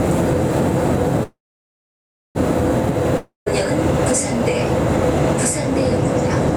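A recording of everyday sounds with gain pumping throughout: the background swells between loud events and ducks by around 5 dB under each one, likely from excessive input gain and a fast limiter. A call audio freeze runs from 1.23 to 2.37 s, where the last sound trails off and about 0.99 s of silence follows. The audio then resumes where it stopped, 1.12 s late and with nothing lost, likely from delayed packets emptying the jitter buffer. A long network dropout from 3.17 to 3.48 s shows the same fading trail with 0.14 s of silence, and the audio returns with about 0.3 s skipped, likely from packets that never arrived.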